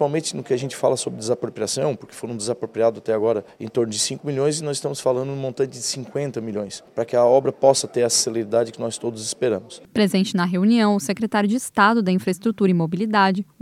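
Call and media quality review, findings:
No audible faults found in this call and media quality review.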